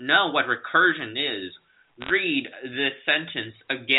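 Speech over a telephone-band line, G.711 A-law by the sound of it, with nothing above 4 kHz. From about 2.01 to 2.11 s there's a short burst of crackle: bit errors on a digital phone line. Flipped bits in the 8-bit log-coded samples each wreck a single sample, and when a high bit, or the sign of a loud sample, gets hit you hear a sharp tick. The density suggests an error rate somewhere around 0.4 percent in that stretch.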